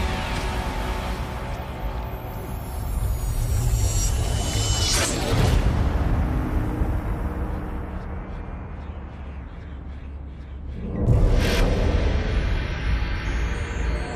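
Nothing technically wrong turns up anywhere in this one; it's just sound, with no faults to point to.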